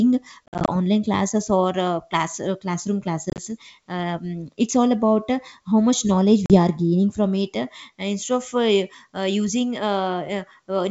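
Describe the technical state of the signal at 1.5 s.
At 1.5 s the audio is intact, with no fault in the signal at that moment beyond the wideband telephone character of its G.722 coding at 64 kbit/s.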